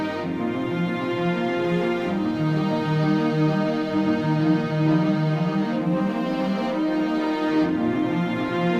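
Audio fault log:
8.46 to 8.54 s, DAB burbling: right near the end of the music there's a short burst of burbling, lasting around 70 ms. That's weak reception letting bit errors slip past the error correction into the MP2 data. Even a tiny error rate, well under one percent, is enough to corrupt samples, putting short blips of noise into single sub-bands. Five frames were damaged.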